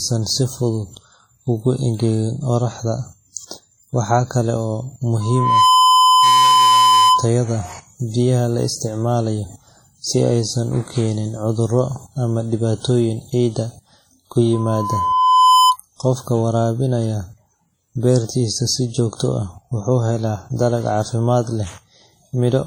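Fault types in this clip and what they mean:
WMA compression: throughout, heavy ringing, washy smearing and hiss that breathes with the speech, likely from a transform codec's long blocks at a low bitrate near 32 kbps.
Loudspeaker feedback squeal: 5.20 to 7.30 s and 14.53 to 15.77 s, a 1 kHz tone swelling over roughly half a second and one second, as the mic-speaker loop's gain exceeds one, reaching about 10 dB above the speech.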